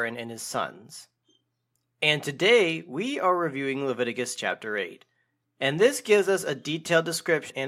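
At 7.49 s, near the end of the clip, compressed frames are skipped. The decoder drops a short run of 26.1 ms frames, likely around seven, so roughly 150 ms of audio vanishes.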